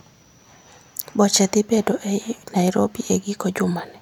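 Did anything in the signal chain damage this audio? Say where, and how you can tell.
No, nothing in the signal chain audibly damaged this speech recording, and the signal stays continuous and stable throughout.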